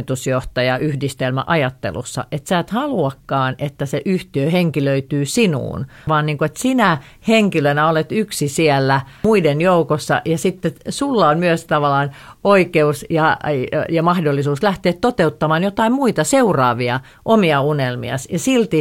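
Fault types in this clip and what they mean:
No technical faults heard.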